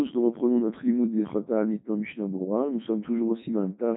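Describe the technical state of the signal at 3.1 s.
At 3.1 s the speech is still under the Codec 2 vocoder present throughout. It is rebuilt from sine waves, so it sounds buzzy and robotic. The spectrogram shows nothing above 3.9 kHz, consistent with its 3.2 kbit/s mode.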